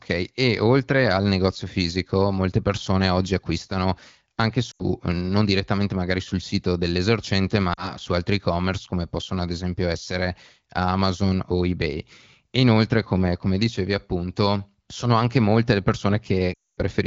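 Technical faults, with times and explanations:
4.71–4.85 s (after "persone oggi acquistano anche"), 7.73–7.97 s (after "magari sul sito dell'esercente"), 16.53–16.80 s, lost AMR speech frames: the decoder repeats the last good frame's pitch and vocal tract settings at falling gain, so the sound smears, then fades. On a spectrogram, harmonics stretch flat and dim into a short gap. The waveform shows decaying, repetitive cycles.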